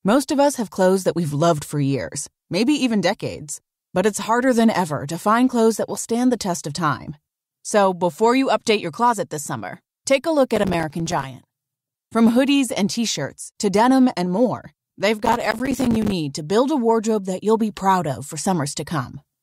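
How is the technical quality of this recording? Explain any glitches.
The recording has two bursts of processor overload crackle, at 10.56–11.24 s and 15.19–16.12 s. Dozens of roughly 5 ms buffers miss their deadlines, leaving silent gaps that tear the speech into gritty crackle.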